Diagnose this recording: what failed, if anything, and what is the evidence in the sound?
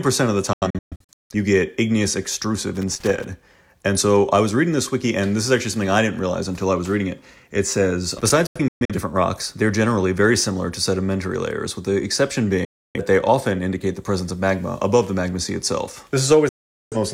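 Digital broadcast dropout at the reception stage: the sound mutes in short, quickly faded holes at 0.53–1.35, 8.47–8.95, 12.65–13.0 and 16.49–16.97 s, as failed frames are silenced.

Loose connector crackle in the analogue wiring: irregular scratchy bursts at 2.75–3.25 and 8.18–8.30 s, as an intermittent contact makes and breaks the signal.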